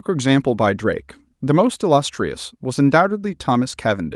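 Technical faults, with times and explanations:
No technical faults detected.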